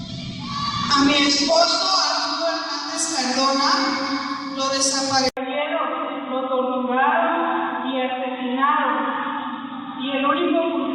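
For the first 2.0 seconds the audio is dull and smeared, with nothing above about 8.2 kHz and strong codec artefacts. At 2.0 s it clears abruptly with no gap. This is an adaptive stream starting at a low bitrate: the player began on a cheap encoding, which fits something like 12 kbit/s Opus, to start fast, then stepped up to a richer one, around 64 kbit/s, once it had gauged the connection. On a spectrogram the upper band is empty or blotchy until a clean vertical edge at 2.0 s. At 5.29 s there is an 80 ms silence, after which the sound turns boxy and narrow for the rest of the clip, cut off above about 3.8 kHz, with a faint new hiss well below the signal and little change in loudness. The likely cause is an input switched to a poorer device, such as a headset's call profile replacing the original microphone. A waveform shows a brief flat gap at 5.29 s, and a spectrogram shows a hard ceiling near 3.8 kHz from there on.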